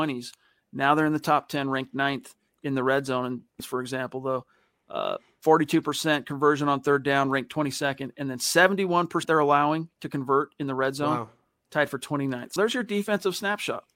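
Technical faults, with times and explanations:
3.60 s, 9.23 s and 12.53 to 12.56 s: damaged data in a compressed stream. Corrupted bytes make the decoder misread frames and lose sync. Each is a brief chirp, squawk, click or short hole, lasting up to about 36 ms.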